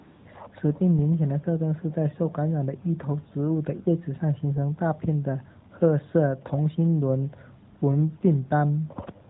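Right at the start, from 0 to about 0.26 s, there's AMR comfort noise. The phone decided nobody was talking, so it stopped sending speech frames, and the far end filled the gap with a smooth synthetic hiss built from a rough sketch of the background's level and tone. It happens again briefly, one frame's worth, at 7.80 to 7.82 s, where the real room sound drops out and gets swapped for that flat, even noise for a moment.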